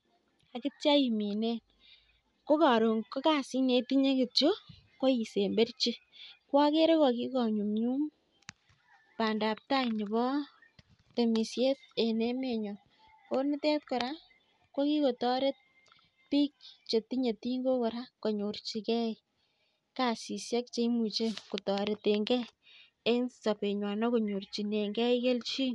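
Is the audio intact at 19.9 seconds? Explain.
No. Bluetooth LC3 compression runs through the whole clip, including 19.9 s, and the speech has nothing above 11.6 kHz and a plainly audible grainy, breathy edge. The likely cause is an LC3 encoder zeroing upper-spectrum detail and noise-filling it, which fits 10 ms frames at about 48 kbps.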